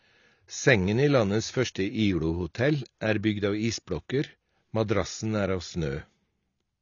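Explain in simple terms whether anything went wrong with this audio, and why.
Something did go wrong, and it runs through the whole clip rather than hitting one spot. The speech sounds dull and a bit smeared, with a fizzy, warbly edge on hissy sounds, and there's nothing at all above about 7 kHz. The likely cause is heavy AAC compression. To save space, the encoder threw away the top end and only roughly kept the rest, so the detail that makes speech crisp just isn't there anymore.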